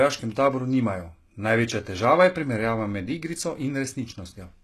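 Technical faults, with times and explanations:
Throughout, HE-AAC compression: the audio was likely squeezed through a low-bitrate codec, with a bandwidth pointing to around 16 kbps, so only the lower spectrum is truly coded and the treble is rebuilt by copying lower bands upward. Nothing survives above 12.3 kHz, and sibilants sound gritty and metallic.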